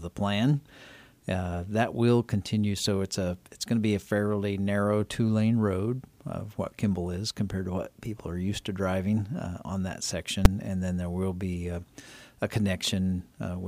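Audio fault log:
10.45 s, invalid numbers at full scale: a calculation produced infinite or invalid values that became the largest positive or negative value, pinning the output flat at one extreme, far beyond the audio's peaks, for about 5.8 ms. The span, consistent with a 256-sample block, is too short to hear separate edges, so it lands as a single loud bang.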